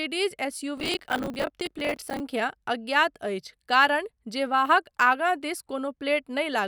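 From 0.77 s to 2.2 s the speech carries a burst of processor overload crackle. The processor could not finish its audio buffers in time, and deadlines were missed in quick succession. Each miss replayed a scrap of old audio with hard edges. The buffers seem to be around 10 ms long, and dozens failed in this stretch. The result is a gritty, tearing crackle laid over the sound. It stops once the load eases.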